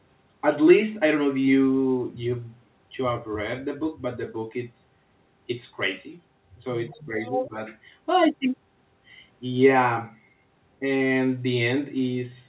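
From 6.89 to 7.57 s the speech is suppressed in double talk. The level dips by roughly 10 dB for about half a second, likely because the echo canceller turned everything down while both sides spoke, and the waveform envelope sags visibly. Within that span the other side's voice leaks through twice: faintly at 6.91 to 7.03 s, far below the speech, then strongly at 7.23 to 7.48 s, nearly as loud, likely residual loudspeaker echo. On a spectrogram these show as a second set of harmonics overlapping the talker, all confined below 4 kHz by the narrowband call path.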